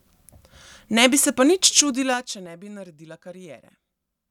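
From 1.76 to 2.48 s the speech drops by roughly 20 dB with a rapid ticking, about ten clicks per second, riding on it: zipper noise. The gain was lowered in unsmoothed 3 dB jumps, and each abrupt step leaves its own click.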